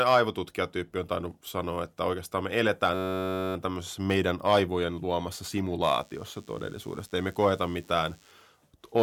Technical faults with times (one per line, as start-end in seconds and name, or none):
2.94-3.55 system hang loop
5.95-8.31 DECT cordless phone buzz